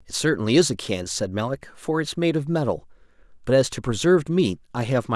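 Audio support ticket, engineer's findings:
Listened to the full speech clip; no audible defect found, nothing to action.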